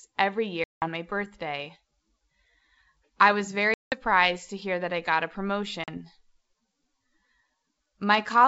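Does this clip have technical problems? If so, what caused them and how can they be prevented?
Yes. The speech drops into hard-edged silence at 0.64–0.88 s and 3.74–3.98 s (about 180 ms lost each) and at 5.84–5.97 s (40 ms), then returns slightly distorted before settling. This is packet loss on an ADPCM call, here the G.722 wideband coding at 64 kbit/s. The gaps were filled with silence, so the decoder's adaptive predictor and step size drifted out of step with the sender's until they resynchronised. Prevent it with a jitter buffer, packet-loss concealment and reset of the decoder state after lost packets.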